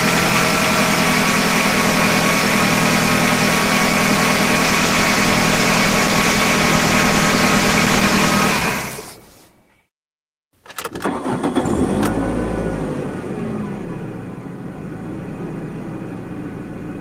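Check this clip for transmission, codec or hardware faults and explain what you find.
One fault: a call bitrate drop. From 4.65 to 8.37 s the sound turns rougher and duller, consistent with the encoder's rate falling from 32 to 18 kbps after the bandwidth estimate dropped.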